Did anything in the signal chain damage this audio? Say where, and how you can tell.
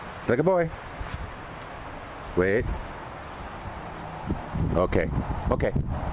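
No, nothing in the chain.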